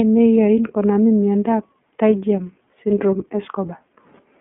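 The clip is speech, and the iLBC codec damages it from start to finish. Nothing is heard above about 3.7 kHz, and the audible band runs from roughly 200 Hz to 3.5 kHz, so the sound is thin and telephone-like. Each 30 ms frame is coded on its own, with no help from the frame before. That leaves a plainly audible rough, synthetic grain on the voice. The coarseness fits iLBC's 13.33 kbps mode.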